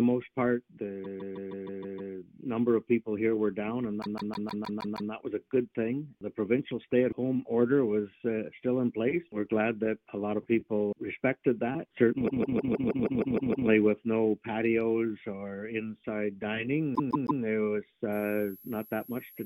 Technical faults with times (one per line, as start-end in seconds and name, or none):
1.03-2.13 repeated frames
4.01-5.11 repeated frames
12.27-13.68 repeated frames
16.94-17.41 repeated frames
18.12-19.46 switching supply whistle